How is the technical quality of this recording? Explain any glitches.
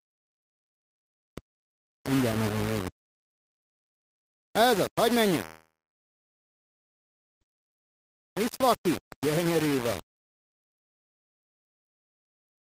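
The technical quality is poor, with three distinct problems.

Throughout the clip the audio is coarse and grainy, most likely from low bit depth without dither. The sound appears reduced to about 4 bits and rounded, so the error tracks the signal and sits only roughly 10 dB below it. Quiet passages turn gritty or sputter between levels. On a waveform the trace looks visibly stair-stepped. A spectrogram shows a raised, signal-following noise floor smeared across the band.

From 5.45 s to 7.43 s there is a call audio freeze, likely caused by delayed packets emptying the receiver's jitter buffer. The last sound is stretched into a fading buzz or hiss, then about 1.7 s of silence, before playback resumes exactly where it left off. Nothing is lost, but almost 2 s of delay is inserted. The waveform shows a decaying tail followed by a flat line. The spectrogram shows a smeared, fading band and then an empty stretch.

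From 7.69 s to the end, a jitter buffer speed-up runs the audio at about 113% of normal speed with unchanged pitch. The receiver trims many short pitch-period slices to work off a backlog in the buffer, removing roughly 0.7 s in total. The result sounds hurried. On a spectrogram, events are compressed in time while harmonic spacing stays the same. The waveform may show small splice discontinuities.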